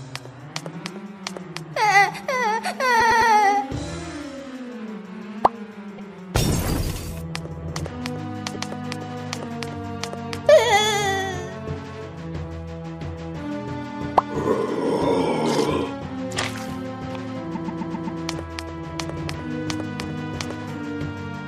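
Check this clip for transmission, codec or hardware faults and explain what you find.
A stutter is heard four times as short stretches of sound play again: at 2.99 to 3.31 s a 104.5 ms block repeats three extra times, at 5.97 to 6.10 s a 130.6 ms block once, at 8.53 to 8.69 s a 156.7 ms block once, and at 17.54 to 18.20 s a 130.6 ms block five extra times. These are repeated frames: the same run of compressed frames was sent or stored more than once and decoded again, adding about 1.25 s in total.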